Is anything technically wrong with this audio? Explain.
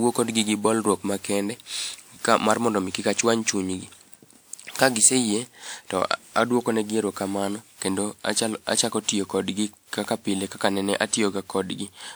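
Yes. Generation loss runs throughout the speech, likely from around ten repeated lossy encodes that point to WMA 1 near 128 kbit/s. Each pass requantises on a shifted frame grid, so noise piles up: the sound turns swirly, smeared and hollow, and attacks blur.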